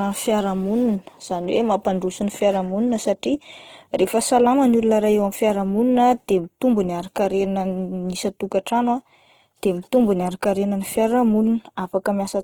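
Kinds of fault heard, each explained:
Opus compression: Short of bits, the encoder, likely Opus in its music (CELT) mode at a rate the sound puts around 16 kbps, keeps each band's overall energy but rebuilds the fine detail from folded copies of lower bands or from noise. The speech therefore comes out grainy and rough rather than swirly, and the damage is plainly audible throughout, even though the bandwidth stays full and reaches about 20.2 kHz.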